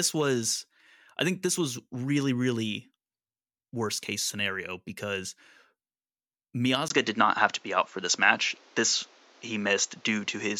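At 6.88 s the speech cuts out for 20 ms. From there to the end, nothing is heard above 7.6 kHz, so the sound turns dull. The level shifts by about 5 dB, and a faint new background noise appears. The likely cause is an input switched to a poorer device.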